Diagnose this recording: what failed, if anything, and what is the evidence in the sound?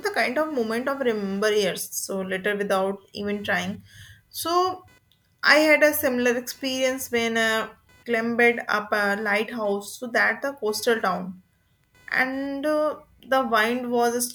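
What failed is the analogue side: there's computer activity noise riding under the speech for the whole clip. It's a buzzy, chirpy pulse train somewhere around 500 Hz, sitting roughly 35 dB below the voice, and it keeps going in the pauses because it follows the machine, not the talker. Changing processor, graphics or mouse load is pulling current through a ground the interface shares, so the wiring or grounding needs sorting out.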